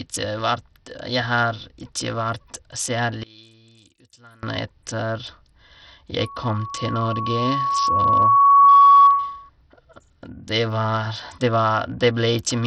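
From start to end, the speech carries heavy coding damage, likely from Bluetooth SBC compression. Nothing remains above 17.7 kHz. The upper treble flickers, and a gritty grain rides on the voice. That fits a small bit pool near 64 kbps, starving the top sub-bands.

From 3.23 to 4.43 s, the speech drops by about 24 dB and turns faint. This likely comes from one channel inverted. With reversed polarity on one side, the shared centre content cancels when the two channels are summed.

From 6.20 to 9.50 s, a loudspeaker feedback squeal appears. A single 1.1 kHz tone swells over roughly three seconds until it sits well above the speech. The microphone is hearing its own loudspeaker, and the loop gain exceeds one at that frequency.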